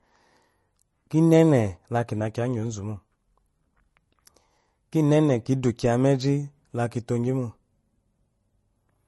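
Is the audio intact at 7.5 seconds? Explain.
No. At 7.5 seconds, as through the whole clip, the speech has a watery, swirly edge and nothing above 11.6 kHz. That's likely MP3 compression at a low bitrate, around 40 kbps, where the encoder cuts the treble at a fixed frequency and weak components in starved frames flicker in and out.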